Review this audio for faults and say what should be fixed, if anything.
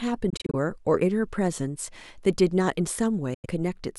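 The speech drops out twice, likely from a Bluetooth dropout where packets miss the headphones' deadline. Between 0.30 and 0.55 s, about 116 ms goes missing as several short holes spread over roughly 232 ms. The longest is about 23 ms, which fits single lost packets. From 3.34 to 3.46 s, about 93 ms vanishes. Each time, speech resumes as though it had kept playing. On a waveform these show as flat silent stretches. A spectrogram shows blank vertical bands across all frequencies. To prevent this, keep the source close with a clear line of sight and reduce 2.4 GHz interference or the link's bitrate.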